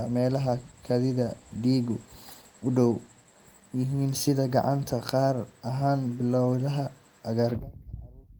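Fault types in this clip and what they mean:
Call bitrate drop: from 0.35 to 3.19 s the speech turns steadily coarse and dull, fitting a fall from 32 to 18 kbps, with no packet-loss dropouts.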